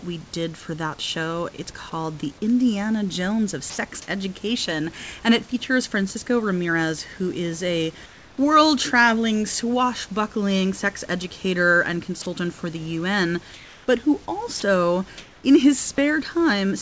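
Speech recorded through a call path whose wideband codec leaves nothing above 8 kHz. Three short bursts of sound dropped by the voice detector replace the signal with steady noise: 3.70 to 3.78 s, 12.22 to 12.26 s between "swashbuckling sex educator and" and "for the", and a single cut at 14.60 s. The likely cause is the sender's detector misjudging quiet speech or word endings as background and halting transmission, leaving the receiver to fill the gap. Comfort noise in place of the background appears at 8.06 to 8.38 s between "who is a" and "world traveling swashbuckling sex", at 13.54 to 13.88 s, and at 15.18 to 15.44 s. In these pauses the room background turns into flat, featureless noise whose level shifts by about -3, -2 and +1 dB, likely because discontinuous transmission had the receiver synthesise the fill.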